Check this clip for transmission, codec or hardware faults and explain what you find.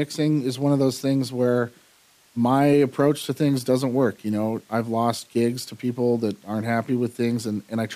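I find no faults to report in the clip.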